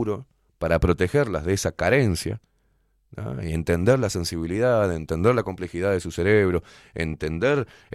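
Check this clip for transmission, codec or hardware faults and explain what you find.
No faults found.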